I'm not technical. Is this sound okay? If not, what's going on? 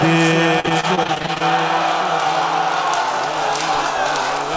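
No, not quite. From about 0.60 to 1.42 s there's repeated packet loss, which gives that choppy, robotic sound. During that stretch, bits of audio kept failing to arrive in time, 13 small gaps with the longest around 39 ms. Each time, the system filled the hole by stretching the last bit it had. About a third of that stretch is patched-in filler, so it sounds broken up. The call line itself, which stops at 8 kHz, comes through as expected.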